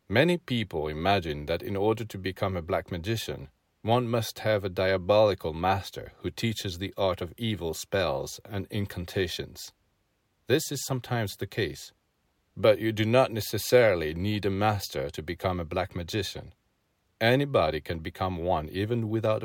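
A speech recording with no technical faults to be heard anywhere in the signal.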